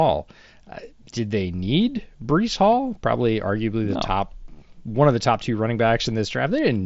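No faults can be heard in this speech; it has the band-limited sound of a wideband Bluetooth headset link on the mSBC codec, with nothing above about 7.7 kHz and a light grain on the louder sounds.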